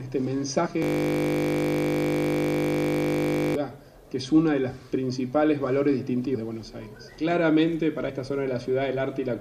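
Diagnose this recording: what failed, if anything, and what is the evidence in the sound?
At the codec stage, whole compressed frames were lost or rejected by the decoder, so playback jumps forward. Compressed frames are skipped at 0.65 to 0.67 s, 6.34 to 6.36 s and 8.08 to 8.10 s. The gaps in time are roughly 70 ms, 100 ms and 50 ms, each a whole number of frames, which fits a frame length near 23 ms.

At the driver or buffer stage, the system hung while the audio hardware kept cycling its ring buffer, a system hang loop. From 0.82 to 3.55 s, one 20 ms slice of audio repeats exactly, well over a hundred times. A loop that short turns into a steady 50 Hz buzz, not a stutter, and the loop length points to a buffer of about 20 ms being replayed until the system recovered.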